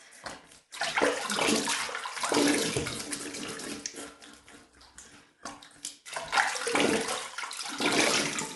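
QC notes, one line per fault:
Throughout: low-delay AAC compression. The sound is rough and grainy, with a noisy texture filling the gaps between tonal components, and nothing is present above 11.6 kHz. This is likely AAC-ELD coding. Its short frames of roughly 10 ms give poor frequency resolution, so the tonal detail smears and the coder spends bits inefficiently. The damage is plainly audible and fits a bitrate around 32 kbps, which is too low to hold the top band.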